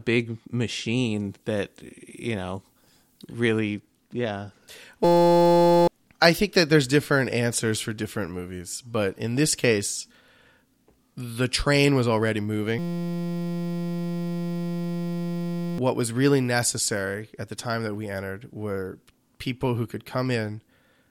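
Pre-emphasis left on from 0.97 to 3.59 s: the treble boost, consistent with the CD 50/15 µs curve, was never undone, leaving highs about 8 dB too strong at 10 kHz, so the speech turns thin, bright and sibilant. A system hang loop at 5.05 to 5.88 s, just before "i think that there's", repeats one 5.8 ms piece of audio, consistent with a 256-sample buffer, while the system stalls. This produces a steady 172 Hz buzz and wipes out under a second of speech. The same hang loop returns from 12.79 to 15.78 s, between "the train was already" and "was really necessary at", buzzing for about three seconds in place of the lost audio.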